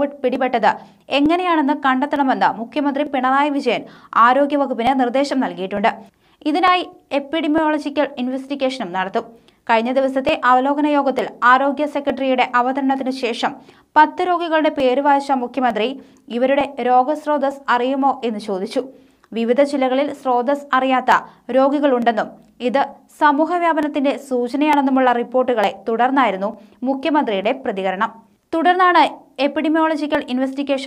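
A regular tick recurs about every 0.90 s from 0.36 s to 30.15 s, some thirty times in all. These are likely clock drift buffer slips: two free-running clocks disagreeing by around 700 ppm, so a buffer periodically drops or repeats a small block, which fits about 30 samples per slip.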